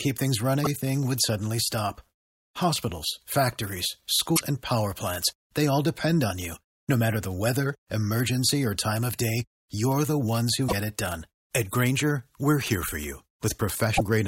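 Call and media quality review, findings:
Damaged data in a compressed stream: brief glitches at 0.62–0.67, 4.33–4.41, 10.65–10.73 and 13.94–14.00 s. Corrupted frames make the decoder lose sync and hunt for the next header.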